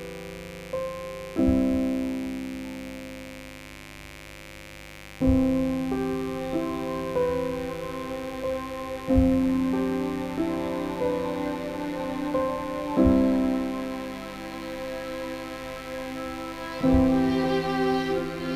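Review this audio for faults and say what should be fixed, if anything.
Mains buzz runs throughout the clip, a steady, raspy buzz roughly 20 dB below the sound. Switching spikes, twice per cycle of a 50 Hz supply, leak in through a dimmer, rectifier or unshielded cable, spreading harmonics into the kilohertz range. To prevent it, keep recording cables shielded and away from dimmers and power supplies.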